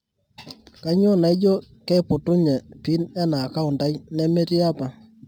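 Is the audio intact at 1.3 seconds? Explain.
No. Crude rate conversion runs through the whole clip: nearest-sample conversion from 48 kHz to 44.1 kHz leaves a gritty, inharmonic fizz roughly 35 dB below the speech.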